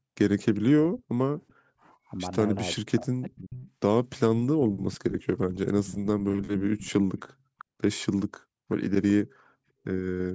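A faint echo leak at 0.54 s, likely from a far-end loudspeaker whose echo canceller let some pickup through, returns the speech about 388 ms late and far below it. It shows as a weak, shifted copy of earlier harmonics on a spectrogram.

From 0.62 to 1.95 s and again from 2.75 to 3.62 s, speech is suppressed in double talk. The canceller likely confused talker and echo and ducked both. The sound dips by around 40 dB in chunks, leaving gaps in the waveform envelope.

Further echo leaks follow at 3.58 to 4.2 s, 5.87 to 7.65 s and 8.7 to 9.11 s, each again delayed 388 ms. They are faint in the first and last spans and fairly strong in the middle one, where doubled harmonic stripes are clearly visible.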